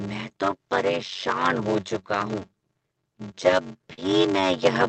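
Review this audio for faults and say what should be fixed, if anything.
A block size mismatch (padded) runs through the whole recording. Each block is short and zero-filled up to what fits a 512-sample read buffer, giving a buzz at 93.8 Hz. The speech also runs at 0.625 times normal speed while keeping roughly its usual pitch. A waveform shows regular flat gaps, and a spectrogram shows vertical stripes at that rate. Matching the block sizes on both sides of the stage, or buffering properly between them, would prevent it.

Automatic gain rising starts at 3.41 s, just before "लेता हूँ", and continues to the end. Speech and background swell together as the gain control lifts the level. The waveform envelope widens steadily, and the spectrogram brightens evenly across all frequencies. Capping the gain control's upward rate or setting a sensible input level would prevent it.

A short concealed packet loss spans 3.93 to 3.99 s, where about 40 ms of audio arrived too late. 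The receiver extended the preceding sound for 39 ms and then blended back, which is heard as a brief smear. On a spectrogram it appears as a smoothed, repeated patch. A larger jitter buffer or forward error correction in the Opus link would prevent it.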